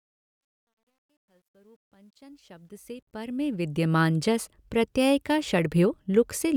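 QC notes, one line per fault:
0.00–3.94 s, truncation distortion on a fade: the level rises during the fade-in, but the lowest part, worst from 0.0 to 2.4 s, sounds gritty instead of emerging cleanly from silence. The gain stage appears to keep too few bits, which fits an 11-bit path with no dither. Quiet speech is therefore forced onto a few coarse steps, turning the waveform into square-edged fragments until the level reaches full at 3.94 s.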